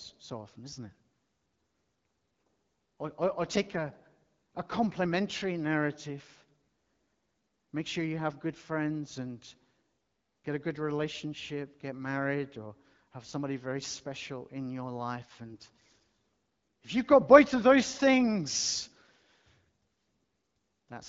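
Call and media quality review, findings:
AMR bit errors, 15.46 to 15.64 s, on an AMR-WB HD Voice link at 12.65 kbit/s. Brief hoarse, scratchy, gargly stretch, with pitch and level roughly held. Flipped unprotected bits misplace excitation pulses and skew gain and spectral values. The span fits about nine 20 ms frames and a few percent bit errors. Spectrogram shows smeared, noisy harmonics there; the waveform envelope stays intact.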